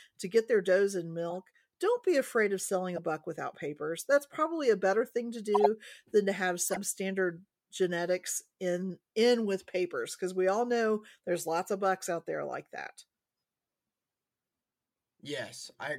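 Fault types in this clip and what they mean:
Corrupt frame decoded: damaged compressed frames were decoded and played rather than concealed, so misread gains and codes place energy at the wrong frequencies for the span of each bad frame. Short chirps and noise bursts appear at 1.30–1.36 s, 2.96–2.98 s, 5.54–5.66 s and 6.63–6.77 s. The longer ones suggest several consecutive frames were hit. The 5.54 s burst is loudest, peaking around -10 dBFS, and the first is faintest.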